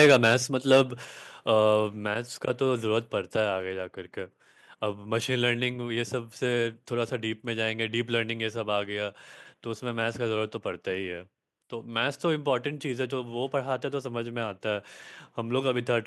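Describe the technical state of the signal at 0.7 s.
At 0.71 s the speech runs into microphone overload, lasting until 0.81 s. The peaks push about 4 dB past the converter's ceiling, so their tops are sliced flat. A few percent of the samples in that span sit pinned at the limit. You hear this as a harsh, crackly edge on the loudest part of the syllable. The likely cause is an input gain set too high for that burst of level.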